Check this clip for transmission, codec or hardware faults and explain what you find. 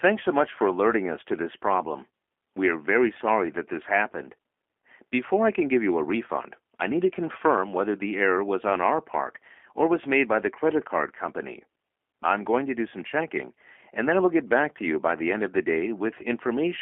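Throughout the speech, the sound is thin and slightly rough, with a synthetic edge and nothing above 3.4 kHz or below about 250 Hz. That is G.729 codec damage, plainly audible: the voice is rebuilt in 10 ms frames from a vocal tract filter, pitch predictor and sparse pulses, which fits 8 kbit/s G.729A.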